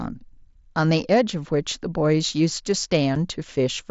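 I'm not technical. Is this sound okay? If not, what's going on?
No. At about 3.15 s there is a brief gap of about 7.5 ms: unconcealed Bluetooth headset packet loss. One small piece of the voice signal travelling wirelessly from the headset to the phone never arrived, and nothing filled the hole, so the sound cuts out and snaps back with a sharp edge. Unlike a bad cable or a mouth click, it is a clean, instant dropout rather than a pop added on top of the speech.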